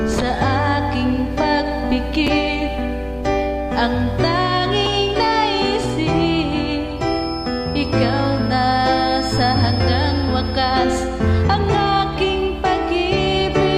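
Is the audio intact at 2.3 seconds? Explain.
No. At about 2.27 s there are chunks out of order: one chunk of roughly 5.33 ms was delivered or written late and plays after the chunk that should have followed it, which fits a swap with its immediate neighbour. No audio is lost, but the sequence is wrong and creates three hard joins within about 10 ms. The result is a very brief jumbled blip.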